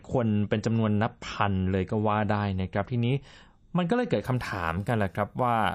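From 0 to 4.25 s this is an adaptive stream starting at a low bitrate: the player began on a cheap rendition before measuring the connection. The speech has nothing above 8.3 kHz, sounding dull and smeared, consistent with roughly 32 kbit/s MP3, then brightens abruptly without a gap.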